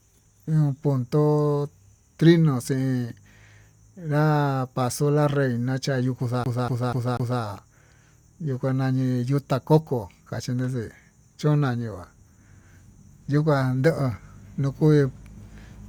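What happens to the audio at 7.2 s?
The speech is caught in a CD stuck on one turn from 6.44 to 7.42 s, just after "paso la reyna chayo'ó": a 0.24 s fragment replays four times, each jump marked by a brief mute.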